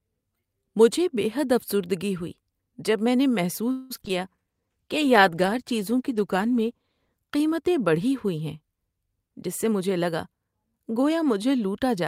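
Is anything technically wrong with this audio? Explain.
Yes, there are four faults.

From 3.71 to 4.11 s, right after "ہوئی جب میں نے", there is repeated packet loss. Five gaps occur, the longest 188 ms. About 60% of the stretch is patched by extending earlier sound, so it turns choppy and robotic.

From 4.42 to 4.67 s, a jitter buffer slow-down follows. The receiver repeats tiny pitch-period pieces to rebuild its reserve. This adds 50 ms. Playback drops to 83% speed at unchanged pitch, so sounds drag.

From 4.51 to 7.26 s, a call bitrate drop takes the stream from 64 to 15 kbps. The low rate lasts 2.64 s. Coarser coding makes the sound rough and watery until it recovers just before "قیمتیں بڑھی".

From 9.06 to 11.10 s, a jitter buffer speed-up trims short pitch-period slices to shed excess delay. Roughly a fifth of a second disappears. Playback runs at 109% speed, same pitch, sounding hurried.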